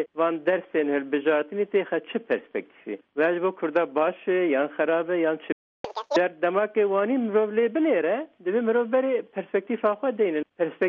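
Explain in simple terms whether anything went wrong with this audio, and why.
At 5.52 s the sound stops dead for about a third of a second, until 5.85 s: a playback stall, likely the player running short of data. The speed-up that follows, rather than a simple skip, sets it apart from a plain dropout.

From 5.85 to 6.16 s the audio runs at double speed and sounds chipmunk-high, roughly ten semitones up. That is catch-up at higher speed, the player rushing to regain lost time. Unlike a pitch error, tempo rises too, and it settles back to normal.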